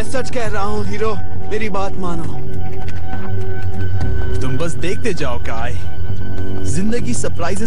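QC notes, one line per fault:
No faults turned up anywhere in this one, so there's nothing to log.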